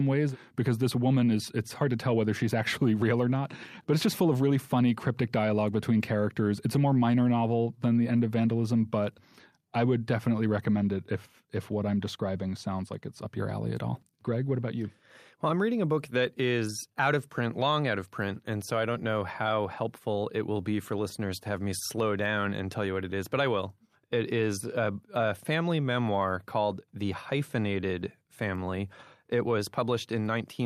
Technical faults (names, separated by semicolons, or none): none